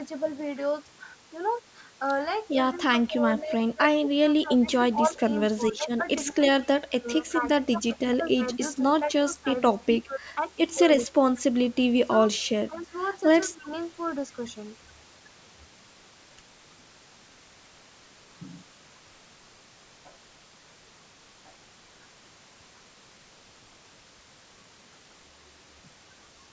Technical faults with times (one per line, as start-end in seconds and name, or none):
2.78-10.21 speech suppressed in double talk
8.23-8.55 echo leak
10.77-11.21 speech suppressed in double talk
10.99-11.06 echo leak
12.31-12.93 speech suppressed in double talk
13.47-13.72 speech suppressed in double talk